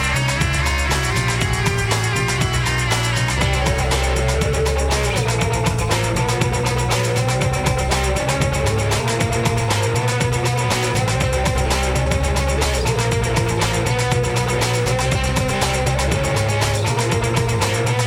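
Whole compressed frames of about 23.2 ms each were never played, either missing from the file or rejected by the decoder as damaged. This is compressed frames skipped. At 8.99 s the audio jumps ahead by roughly a fifth of a second, which points to about ten lost frames. At 12.05 s it jumps again by roughly a tenth of a second, about four frames. Each join is an abrupt jump forward in the audio.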